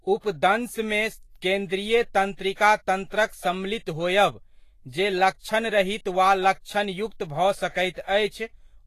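Throughout the speech, treble is hissy and grainy, onsets blurred, nothing above 14.2 kHz: likely Vorbis compression, coarse high-band quantisation turning detail into noise, fitting roughly 32 kbps.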